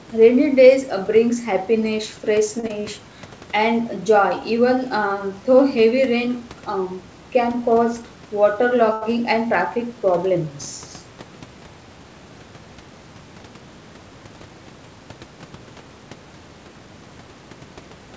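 Right around 2.60 s there's a short stall from a late packet: a packet showed up late, the jitter buffer ran dry, and the receiver stretched the last bit of speech for about 34 ms until it caught up. Nothing's actually lost, and playback picks up exactly where it left off, but that sound hangs a touch too long, with a faint buzzy or dipped quality.

Straight after, from 2.67 to 2.84 s, you get a short concealed packet loss. About 20 ms of audio never made it to the decoder in time, so the receiver papered over the gap by carrying the previous sound forward, pitched if it was voiced and shaped noise if not, then crossfaded back into the real signal. It comes across as a quick smear or wobble, and a brief consonant in there can go missing.

The second stall, from 8.93 to 9.03 s, is the longer of the two. The fill runs about 87 ms, so the held sound is drawn out before speech resumes with nothing skipped. 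All of this sits inside the usual call-band sound, with nothing above 8 kHz.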